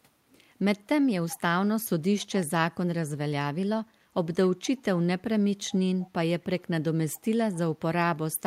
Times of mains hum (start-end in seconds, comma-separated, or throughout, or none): none